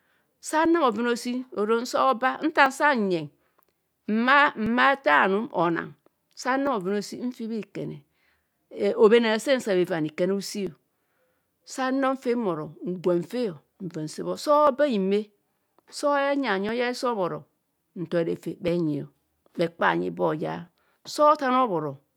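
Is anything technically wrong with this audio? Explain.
Yes. From 0.65 to 20.68 s, periodic USB or driver dropouts occur: something stalls the audio path every 2.0 s, skipping a couple of milliseconds of speech. Each one that lands on speech clicks and shows as a waveform discontinuity and a thin vertical spectrogram line.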